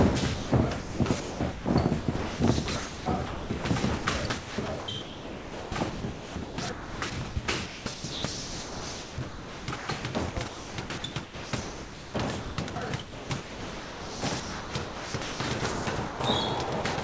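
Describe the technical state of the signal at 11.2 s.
At 11.2 s the signal sits inside a long stretch of sound chopped by the voice detector, running from 0.34 s to 16.98 s. The transmission keeps gating on and off, and about 9.4 s of this span is replaced by a synthetic noise fill. That fill is likely comfort noise inserted while the sender's detector judged the input silent. The result is choppy sound, all band-limited below 8 kHz by the call codec.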